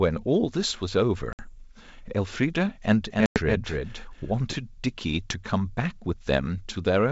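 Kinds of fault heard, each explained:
Packet loss on an ADPCM call: Hard-edged silent gaps, 60 ms at about 1.33 s and 100 ms at about 3.26 s. The decoder's adaptive predictor and step size drift from the sender's across each gap, so the sound resumes briefly disturbed before settling.
Doubled audio track: From about 3.1 s to 4.5 s, a second full-band copy trails the original by roughly a third of a second, a few dB quieter and without any room decay. It starts and stops abruptly, likely from a slower second capture path.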